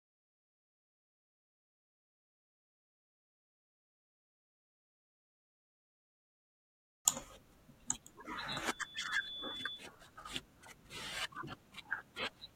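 From 8.50 to 9.88 s the microphone picks up its own loudspeaker, and loop gain exceeds one at 3.5 kHz. The result is loudspeaker feedback squeal: a single piercing tone that swells in under a second until it matches the speech in loudness.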